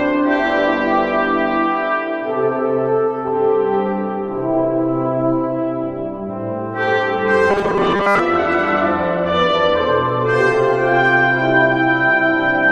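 From 7.51 to 8.19 s, new audio was likely arriving too seldom, so playback kept looping a tiny stretch of what it already had while the real signal went missing. That produces robotic sound from repeated short buffers. For most of that stretch the sound collapses into a rigid, metallic buzz at a fixed 200 Hz, which fits a repeated chunk about 5 ms long, and it only loosely tracks the underlying audio.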